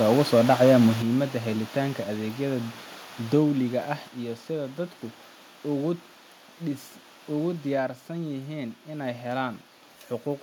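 Microphone overload runs from 0.1 to 0.87 s in this speech recording. The loudest peaks are flattened at the converter's ceiling, about 5 dB beyond what it can hold, with a few percent of samples cut off. This gives a harsh, crackling edge, likely from input volume set too high. A microphone volume step-down follows at 1.02 s, dropping voice and background together by about 7 dB, and another at 4.08 s, between "dowliga ah" and "iyo sida dadku", lowers the level by about 4 dB. Each abrupt step is likely the call software automatically reducing the device's input gain after detecting overload.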